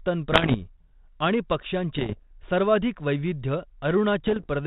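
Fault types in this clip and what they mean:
Bit errors on an ADPCM link: flipped bits, at roughly 0.7 to 1.5 percent, knock the decoder's step size and prediction off track so each error rings on briefly. The speech breaks into pops and rough bursts with sudden level jumps, around 0.3, 1.9 and 4.3 seconds.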